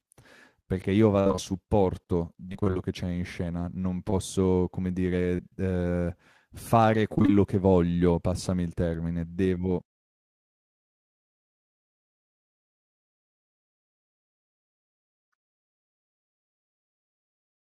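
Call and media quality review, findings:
Repeated packet loss (robotic sound) at 1.19–1.40 s, 2.50–2.78 s and 7.14–7.30 s: choppy speech from jitter buffer/decoder concealment bridging back-to-back holes, up to 61 ms, 43–60% of each span synthesized.

Short concealed packet loss at 4.10–4.14 s and 5.36–5.51 s: brief smear, decoder extrapolating over 20–40 ms of missing audio; the second one's stretched a touch, around 15 ms longer.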